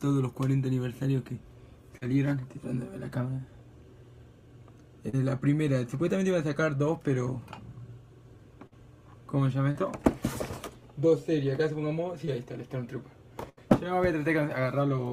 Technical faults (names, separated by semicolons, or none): short concealed packet loss; burst of packet loss